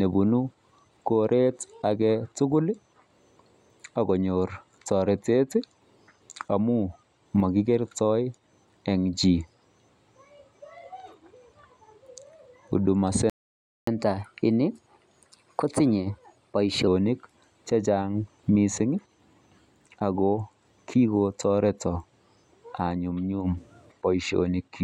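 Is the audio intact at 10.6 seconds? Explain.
Yes, at 10.6 seconds the speech plays through intact, with no dropout, click, distortion or other fault at that point.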